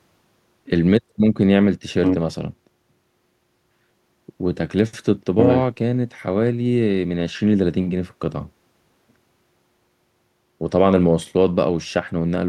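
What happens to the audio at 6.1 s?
Nothing goes wrong at 6.1 s; the speech carries on intact through that moment with no dropout, click or distortion.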